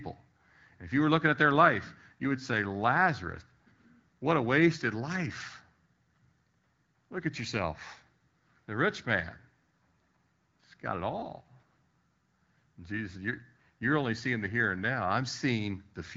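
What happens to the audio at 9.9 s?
Nothing goes wrong at 9.9 s: the speech there carries on intact, coming through the AMR wideband (HD Voice) codec at 12.65 kbit/s with no fault at that moment.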